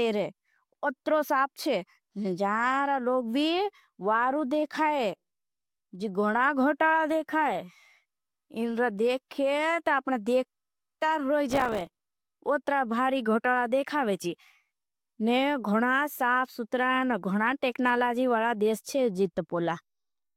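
From 11.50 to 11.99 s a gritty, tearing crackle rides over the speech for about half a second, then stops. This is processor overload crackle: the processor fell behind and missed audio deadlines again and again over that stretch, several dozen small buffers of roughly 3 ms each. Every missed buffer was filled with silence, so the speech is chopped into tiny hard-edged gaps that blur together into continuous crackle until the load eases.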